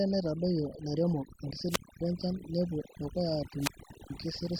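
Throughout the speech, the background sinks to near silence dotted with twinkling specks. This is overdone noise removal: a reduction stage set too hard shuts down any frequency band close to its noise estimate, taking quiet voice detail too.

From 1.68 to 2.01 s and again from 3.58 to 4.11 s, hiss swells, the sound drops into a hole of near silence lasting about 250 ms and then 430 ms, and the voice returns. These are wireless microphone squelch dropouts, where the FM radio signal fades and the receiver's squelch mutes the output.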